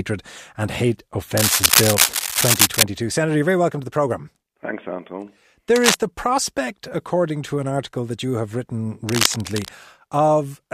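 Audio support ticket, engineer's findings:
Cable scratch noise, three bursts over speech: 1.37–2.83 s, 5.75–5.95 s, 9.09–9.69 s. Dense, uneven scratching, first two roughly 5 dB above the voice, last about level with it. Likely a worn cable or connector being moved, its contact resistance jumping erratically. Spectrogram: ragged broadband vertical smears with no harmonic structure. Waveform: spiky, irregular bursts riding on the speech envelope.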